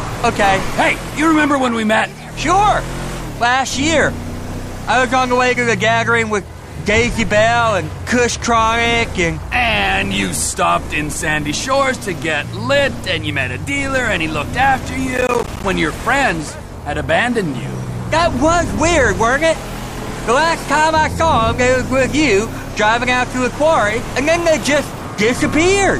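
Processor overload crackle runs from 15.16 to 15.64 s. The processor repeatedly missed its deadlines for small buffers of around 10 ms each, and each miss became a hard-edged silent gap. A dozen or more of these gaps close together form a gritty burst of crackle over the sound.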